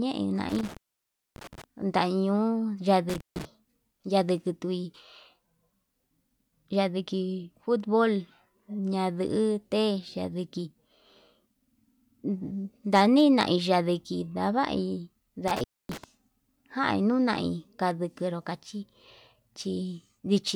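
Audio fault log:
0.49–1.64 s, intermittent contact: the line opens for about 0.6 s. The speech drops out abruptly, with crackle at each edge as the loose connection breaks and remakes, and faint hiss remains while it is open.
3.09–3.45 s, intermittent contact: a shorter break, open for about 0.16 s. The same crackling edges bracket a brief gap where the signal path is interrupted.
12.94–13.43 s, hard clipping: a stage is overdriven by about 4 dB, so the waveform peaks are cut flat. The flattened tops generate harmonics high in the spectrum, heard as crackle on the loudest parts of the speech for about half a second.
15.48–16.04 s, intermittent contact: the connection opens for about 0.26 s, again cutting the speech with crackle on entry and exit and leaving low hiss in the gap.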